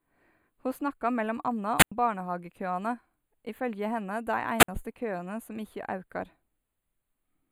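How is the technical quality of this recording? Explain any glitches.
Technical quality is limited by two faults: a constant comb-filtering coloration and two brief wireless microphone squelch dropouts.

Channel delay (comb filtering) runs through the whole clip. One channel arrives roughly a tenth of a millisecond late, around four samples, and summing to mono cancels their shared content at evenly spaced frequencies starting near 5 kHz. The result is a dull, slightly hollow upper range.

Wireless microphone squelch dropouts occur at 1.78–1.92 s, just after "snakka mellom anna", and at 4.58–4.68 s, just before "køane som". The FM signal fades, and the receiver's squelch mutes the output for 93 ms and then 55 ms. Each is heard as a short rise of hiss followed by a hole of near silence before the audio returns.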